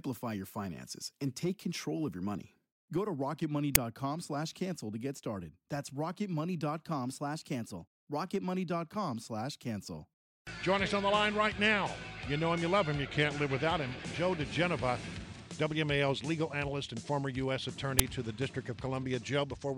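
At 3.75 s and 17.99 s the audio carries an uninitialised buffer: a loud, roughly 6 ms burst of digital garbage, fitting a 256-sample block played before being filled, harsher than a simple click. From 6.89 to 8.42 s speed and pitch rise together by about 6% and a semitone, then from 13.06 to 13.60 s drop by a similar amount, likely a drift correction step, since tempo and pitch move together.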